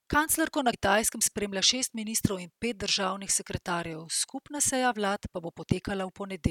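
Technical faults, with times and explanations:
0.70–0.74 s, compressed frames skipped: just before "spremlja šest ministrov in", about a tenth of a second of speech never plays. Whole compressed frames were lost or rejected as damaged, so the decoder jumps ahead.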